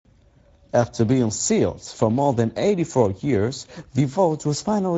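The whole speech clip carries Speex codec damage, plainly audible. Speech sounds hoarse and noisy, which fits a setting near 17 kbps. Nothing remains above 7.7 kHz.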